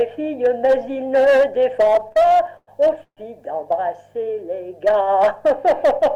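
From 1.85 to 3.19 s, repeated stalls (stutter): the jitter buffer ran dry twelve times, so the sound drags and hiccups. The spectrogram shows smeared, held-over frames in the gaps, the longest 134 ms.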